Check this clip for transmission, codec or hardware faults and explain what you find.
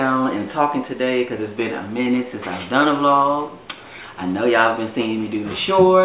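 I found no faults in this clip.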